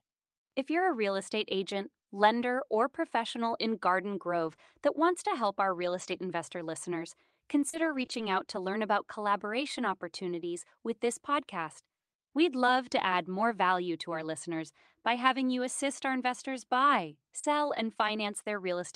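From 4.39 to 8.23 s, just before "out to learn about", there are scattered short gaps, about three, where packets went missing or arrived late. The receiver papered over each hole by carrying the last sound forward, roughly 70 ms in all, with the longest gap around 40 ms. What you hear is a brief tick or smear here and there, and the speech between them is clear.

Later, at 17.39 to 17.45 s, right after "assist our investors buy", a short concealed packet loss takes out 40 ms. The decoder bridged it by extending the preceding sound and then blending back into the real audio, which comes across as a quick smear or wobble.

Overlapping the end of that, at 17.43 to 17.45 s, one packet was a lost packet rebuilt from error correction. The next packet carried a low-bitrate backup copy, so 20 ms plays without a gap, but that stretch sounds rougher and noisier than what surrounds it.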